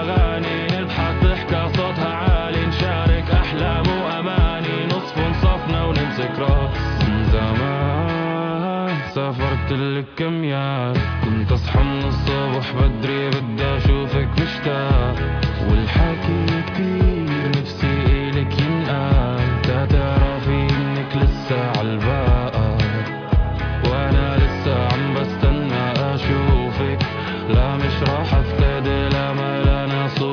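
Listening closely, nothing in the audio stood out as a technical problem.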